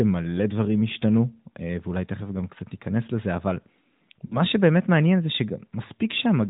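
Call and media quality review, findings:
Lost AMR speech frames, 4.26–4.39 s: short smeared, held-over sound sagging in level, then speech returning weak and rough. Cause: about 40 ms missing, fitting two 20 ms frames failing checksum; decoder repeats last pitch and vocal-tract settings at decaying gain.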